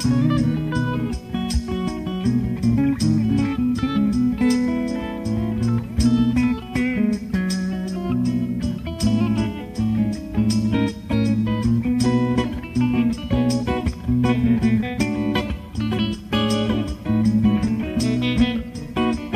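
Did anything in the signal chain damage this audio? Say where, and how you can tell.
No, nothing in the signal chain audibly damaged this audio. No stage, from capture to playback, leaves a mark that can be heard.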